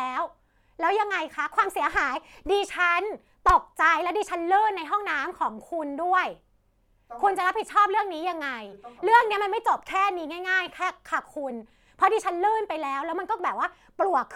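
No technical faults are audible anywhere in the speech recording.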